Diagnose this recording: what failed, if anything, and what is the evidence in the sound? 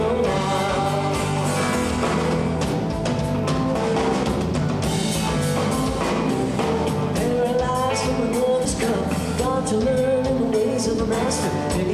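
At 3.75 s the sound jumps forward. About a tenth of a second is gone, and the two sides are butted together with no gap of silence. This is audio missing between chunks, and the likely cause is at the buffer or storage stage. The recorder closes one block of audio and opens the next, and it drops material during that handover. The chunks are 5 seconds long.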